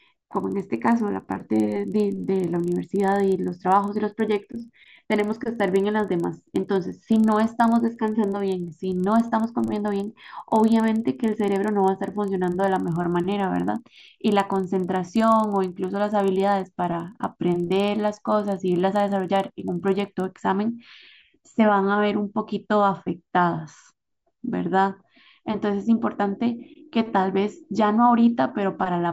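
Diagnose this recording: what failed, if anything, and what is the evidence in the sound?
Sample-rate conversion is at fault: the resampler restarted on every block. From 0.00 to 20.36 s there's a 25 Hz buzz riding the speech, one tick per 40 ms block, because each block edge was interpolated against silence or the block's other end instead of its actual neighbours.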